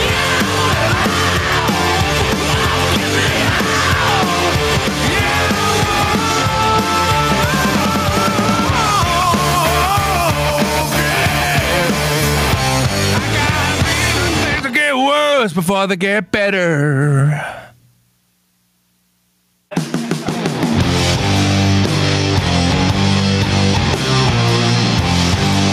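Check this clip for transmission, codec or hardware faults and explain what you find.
One fault is present, running through the whole clip. Gain pumping, throughout: the input gain is likely set far too high, so a fast limiter clamps down on each loud sound and releases in the gaps. The gain swings by around 20 dB, leaving the sound squashed and flat in dynamics.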